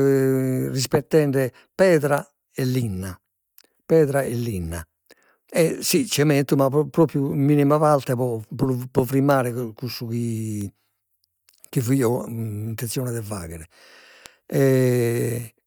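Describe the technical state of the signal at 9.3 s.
At 9.31 s a bit error spike hits a single sample: one flipped bit throws its value by a power of two to about -8 dBFS before it snaps back. It sounds like one sharp tick in the speech, a one-sample needle on the waveform and a thin full-band vertical line on the spectrogram.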